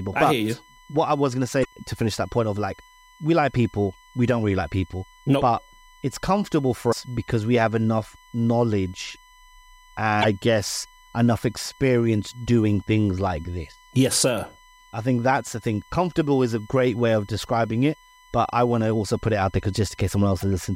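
A steady USB whine at 1 kHz runs under the speech throughout, roughly 30 dB down. It is current drawn in 1 ms bus frames, leaking in through power or ground.

Damaged data in the compressed stream causes brief glitches at 1.61 to 1.65 s, 6.91 to 6.93 s, 10.20 to 10.25 s and 20.40 to 20.43 s. At each, the decoder misreads corrupt frames, loses sync and searches for the next frame header.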